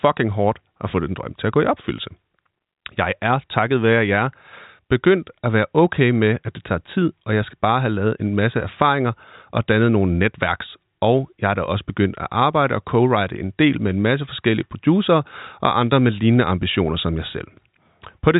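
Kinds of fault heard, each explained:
No fault can be heard in the speech, which sits within a telephone band ending at 3.8 kHz and carries at most faint coding damage.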